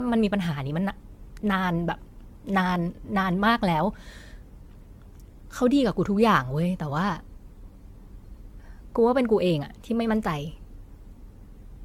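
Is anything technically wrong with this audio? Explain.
Yes. The speech shows generation loss from start to finish. Nothing is present above 17 kHz. The sound is swirly and hollow, with a smeared texture. Consonant attacks are blurred rather than crisp. The likely cause is repeated lossy coding, with the audio decoded and re-encoded about seven times in an AAC-LC chain that fits 96 kbit/s. Each pass quantises on a shifted frame grid. Noise and spectral gaps pile up, so it sounds worse than one encode at that rate.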